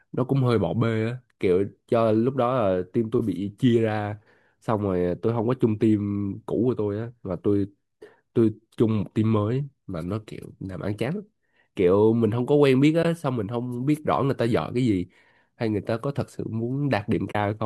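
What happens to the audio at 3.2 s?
At 3.19 s there's a brief AAC frame loss with muting: one short frame, about 10 ms, went missing and the decoder zeroed its spectrum. The overlapping windows fade the speech down and back up, leaving a soft-edged dropout. The short frame likely comes from the low-delay AAC compression in use.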